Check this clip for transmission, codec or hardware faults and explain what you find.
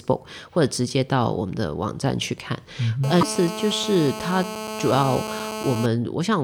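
Two faults are present, overlapping around 3.2 seconds.

GSM phone buzz runs from 3.04 to 5.86 s. A 2G handset on a call transmits in bursts about 217 times a second, and nearby audio circuitry rectifies each radio pulse into the signal path. The result is a hard, raspy buzz at about 8 dB below the speech, nearly steady because a call keeps transmitting. On a spectrogram it appears as a stack of evenly spaced horizontal lines at 217 Hz and its harmonics, running straight through the speech and ignoring it. The waveform shows a regular pulse train riding under the signal.

A broken MP3 bit reservoir is the likely cause of a brief glitch from 3.20 to 3.23 s, roughly one 26 ms frame long. MP3 frames can store part of their data in the space of earlier frames. When a frame is lost, the next one looks back for that borrowed data and decodes bytes that belong to something else, so the audio skips forward through a short corrupted stretch. 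On a spectrogram this shows as a narrow vertical disruption inconsistent with its surroundings, and the waveform shows a discontinuity.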